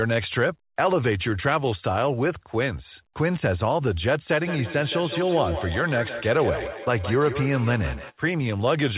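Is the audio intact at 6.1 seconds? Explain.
No, at 6.1 s the sound sits inside a feedback echo between two devices, running 4.31 to 8.16 s. Another device re-plays this microphone's audio, which the microphone captures again about every 150 ms, at up to about -9 dB, each repeat thinner and more ringing. A waveform shows evenly spaced, decaying copies, and a spectrogram shows regularly repeating smeared bands.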